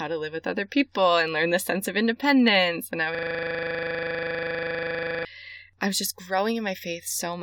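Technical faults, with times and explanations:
0.17 to 7.41 s, clock slip clicks: faint ticks roughly fourteen times a second, likely from two unsynchronised clocks a few hundred ppm apart; unlike dropouts, they are steady and leave no gaps.
3.15 to 5.25 s, system hang loop: one 40 ms piece repeats exactly 53 times, giving a 25 Hz buzz rather than varied stutter, because the buffer kept cycling while the system froze.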